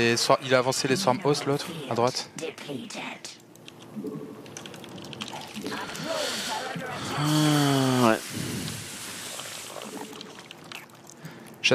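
Frames out of order at 5.84–5.94 s: two adjacent blocks of about 46 ms, consistent with two frames each, play swapped, giving a brief garbled flutter.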